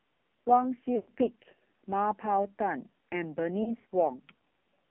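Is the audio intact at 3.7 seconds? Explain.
No. Between 3.64 and 3.85 s the speech briefly dips and warbles in several places, smearing into a drawn-out sound before it returns weak and rough for a moment. These are lost AMR speech frames: about 80 ms of audio is missing, scattered over roughly 200 ms, with the longest gap 40 ms. The decoder covers each gap by repeating the last good pitch and vocal tract settings at falling gain.

Around that moment, the AMR narrowband mobile codec also makes the speech buzzy and heavily synthetic, confined to about 150 Hz to 3.5 kHz. That thin, coarse quality fits a low bitrate near 5.9 kbps.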